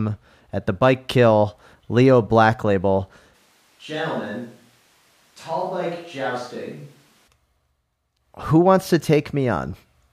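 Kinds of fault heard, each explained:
Switch to a distant microphone: the speech abruptly turns hollow, roomy and about 10 dB quieter, likely because a farther microphone replaced the close one.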